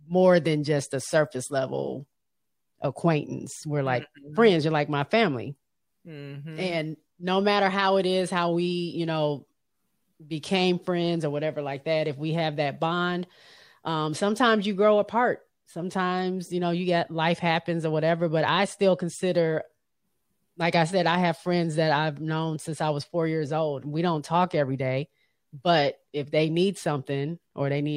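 No audible technical faults.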